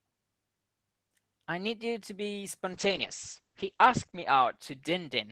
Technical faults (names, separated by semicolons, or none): call bitrate drop